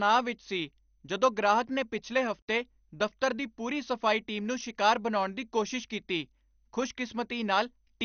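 Across the whole speech clip the sound is dull, with nothing above 6.5 kHz, and a gurgling, granular roughness as upper bands flicker in and out. This is likely MP2 compression at a low rate near 48 kbps, and the flickering bands separate it from a simple low-pass filter.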